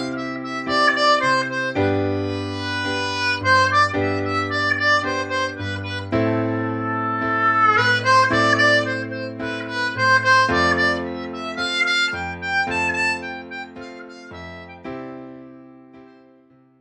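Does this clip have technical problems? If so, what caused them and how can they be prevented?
No, there are no technical problems in this clip.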